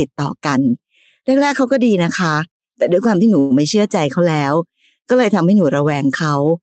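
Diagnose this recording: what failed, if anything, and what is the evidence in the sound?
A call audio freeze at the network and jitter-buffer stage, likely from delayed packets: from 3.39 to 3.52 s the speech is stretched into a fading buzz or hiss for about 0.11 s, then resumes where it stopped. Unlike a dropout, nothing is lost; everything after arrives 109 ms later, over a call path band-limited at 8 kHz.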